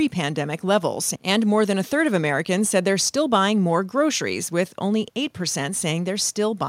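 Nothing in this speech recording stood out as a technical problem on listening.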